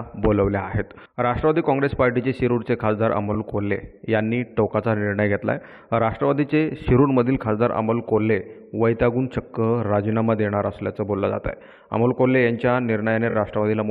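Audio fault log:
3.33–3.36 s, repeated frames: a brief stutter where one 23.2 ms block of sound plays twice. A single compressed frame seems to have been duplicated, which adds 23.2 ms to the clip.
13.29–13.34 s, repeated frames: a slightly longer stutter, as the same 23.2 ms block plays three times in a row. This adds 46.4 ms.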